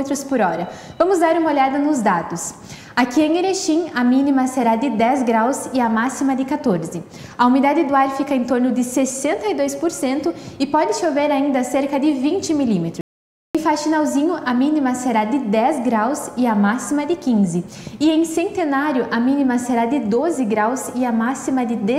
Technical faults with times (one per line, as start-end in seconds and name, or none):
13.01-13.55 audio dropout to silence